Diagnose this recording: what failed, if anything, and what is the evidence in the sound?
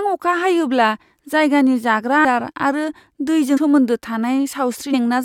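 The fault sits at the codec stage: compressed frames skipped during decoding. At 2.24 s, 3.56 to 3.58 s and 4.93 s the speech jumps forward, losing roughly 150 ms, 100 ms and 300 ms of audio. The jumps fit whole blocks of 21.3 ms frames that were missing or rejected as damaged.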